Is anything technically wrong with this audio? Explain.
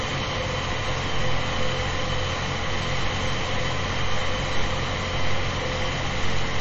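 Yes. Throughout, the sound is likely MP3 compression at a starved bitrate near 32 kbps, cutting everything above 7.9 kHz and leaving a plainly audible watery, swirling smear.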